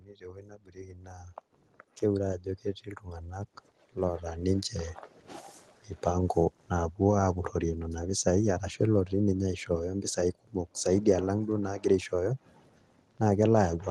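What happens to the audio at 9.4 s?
Nothing goes wrong at 9.4 s: the speech carries on intact through that moment, with no dropout, glitch or distortion breaking into it.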